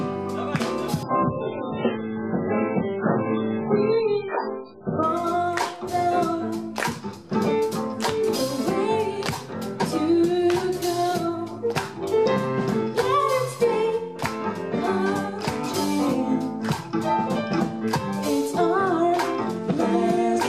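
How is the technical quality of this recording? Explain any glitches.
The quality drops sharply for one stretch. From 1.03 s to 5.03 s the audio falls back to an adaptive stream at a lower bitrate: the delivery switched to a much leaner encoding, most likely because throughput dipped, and then switched back. Over those four seconds nothing survives above about 5 kHz, so the top end vanishes and the sound turns dull and smeared, which fits a jump from around 128 kbit/s MP3 down to roughly 8 kbit/s. Both changeovers are abrupt, with no gap or dropout.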